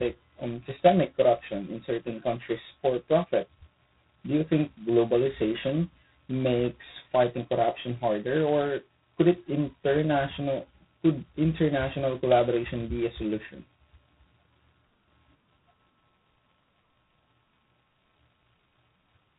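From start to finish the speech carries heavy G.726 ADPCM damage. Coding each sample as a coarse difference from a prediction leaves a harsh, rasping hiss that rises and falls with the speech level, which fits the 16 kbit/s mode. Nothing passes above 3.9 kHz.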